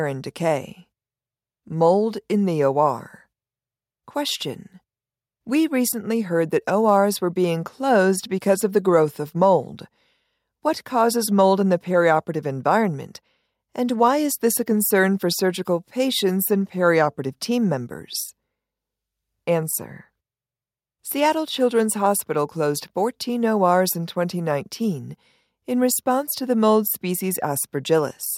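Nothing stood out on listening to this speech recording.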